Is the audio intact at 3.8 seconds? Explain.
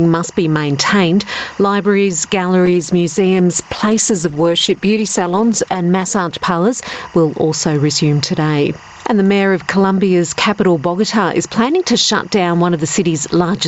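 No. At 3.8 s the sound is rough, watery or muffled. This is a call bitrate drop running from 2.66 to 7.59 s: the call's bandwidth estimate fell and the Opus encoder went from 64 to 12 kbps, coding more coarsely, with the lowest rate holding for about 3.1 s before the quality returns.

A steady chirping warble also sits behind the sound, alternating between roughly 1 kHz and 2 kHz at about 35 dB below the signal. This is timecode bleed: 24-frame linear timecode leaking in from a neighbouring track or cable, present throughout the clip.

The level is squashed as well, with the gain swinging by around 10 dB as loud sounds pull it down. The likely cause is gain pumping: the input gain set far too high for the microphone, with a fast limiter or compressor ducking it on every loud sound, throughout the clip.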